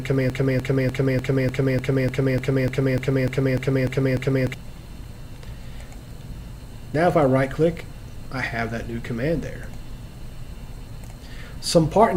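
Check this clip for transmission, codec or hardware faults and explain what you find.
A broken-record loop is present from the very start. From 0 s to 4.54 s, a fragment about 298 ms long plays over and over, exactly identical each time, back to back, about 14 times, and it is already repeating when the clip opens. The stutter has a rigid, mechanical rhythm of roughly three repeats per second. Whatever audio belonged in those seconds never arrives. The likely cause is a stalled player, encoder or stream that kept resending the last fragment it held.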